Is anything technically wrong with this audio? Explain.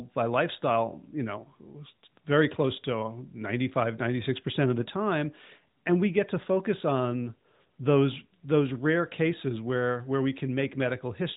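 No, nothing in the signal is technically wrong; it carries the narrowband sound of a mobile call, with nothing above about 3.8 kHz, consistent with an AMR-NB narrowband mobile codec working as intended.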